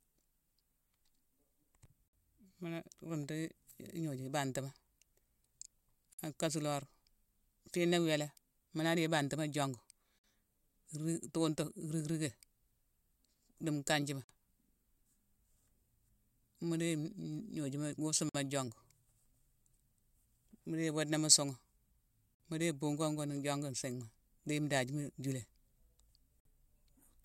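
At 2.08, 6.13, 10.19, 14.24, 18.29, 22.35 and 26.40 seconds, the speech drops out briefly. Each is a gap at a join of encoded pieces, about 53 to 54 ms long. The gaps recur every 4.0 seconds. That regularity points to fixed-length pieces, encoded one by one and butted together. Each encoder run left its start-up silence and padded final frame in place. The edges are smeared. Speech then resumes exactly where it stopped.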